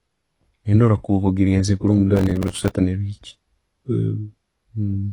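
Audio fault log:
throughout AAC compression: The speech has nothing above 11.5 kHz and is plainly dull and smeared, with a warbling, fizzy texture on sibilants, likely from AAC-LC at a low bitrate near 32 kbps. The smearing and fizz, not just lost treble, set it apart from a simple low-pass filter.
2.15–2.71 s processor overload crackle: A gritty burst of crackle rides on the speech, then stops. Dozens of buffers of a few milliseconds each missed their deadline in a row, and each replayed stale audio with hard edges. The long run of tiny repeats tells it apart from a single dropout or clipping.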